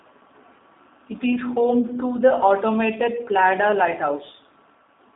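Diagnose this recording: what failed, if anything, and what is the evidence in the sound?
The failure is at the codec stage: the whole clip carries G.729 codec damage, with plainly rough, slightly synthetic speech, consistent with a low-rate model that likely points to about 8 kbit/s. A spectrogram shows a hard ceiling near 3.8 kHz, thin bass below 250 Hz, and smeared harmonics.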